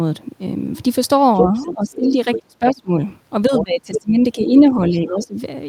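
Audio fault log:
1.36–1.96, 2.32–2.74, 3.56–4.01 and 5.07–5.27 s: other side's voice leaking through. A second voice appears, from near speech level down to about 20 dB below. Uncancelled loudspeaker echo is the likely cause. This adds a talker rather than removing one.
1.41–2.92 and 3.48–5.35 s: speech suppressed in double talk. The main voice drops by up to about 30 dB, then about 20 dB, during the overlaps. The likely cause is the echo canceller turning down both sides at once.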